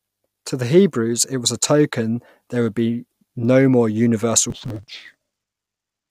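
A speech clip that turns dull and robotic from 4.50 s, just after "be no more universal", to the end, buzzing at 100 Hz. This is interleaved audio read as planar: 10 ms blocks split into halves and played at half speed.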